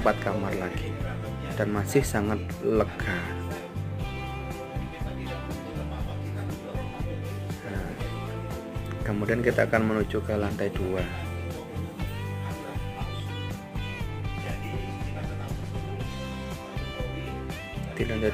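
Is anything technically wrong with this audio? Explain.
Yes. From 2.05 s to 16.95 s, about seven regular clicks recur every 2.48 s, likely clock drift buffer slips: a roughly 300 ppm clock mismatch dropping or repeating around 30 samples each time. They appear as thin vertical broadband lines on a spectrogram and as small waveform discontinuities.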